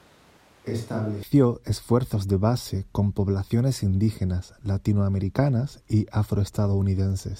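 From the very start until 1.23 s, the speech sounds hollow and roomy, with thin bass, about 10 dB quieter and with room noise roughly 30 dB below it. This likely points to a switch to a distant microphone. Unlike added reverb, it snaps back abruptly before "esfuerzos de base con".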